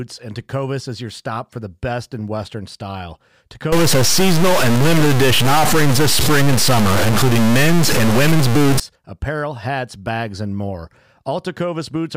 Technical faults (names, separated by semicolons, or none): stuck bit